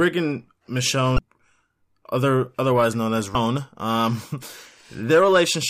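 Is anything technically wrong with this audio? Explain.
Yes. Damaged data in a compressed stream occurs twice, at 1.15 to 1.19 s and at 3.32 to 3.35 s, just after "other otherwise known as". Corrupted bytes make the decoder misread frames and lose sync. Each event is a brief, roughly 30 ms chirp or blip in the speech.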